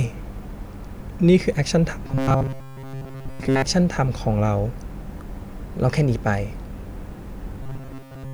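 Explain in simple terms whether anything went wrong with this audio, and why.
The speech turns into a stiff, metallic buzz from 2.07 to 3.62 s and again from 7.63 s to the end. This is robotic sound from repeated short buffers. Audio likely arrived too slowly, so tiny slices kept repeating, forcing a steady 134 Hz drone.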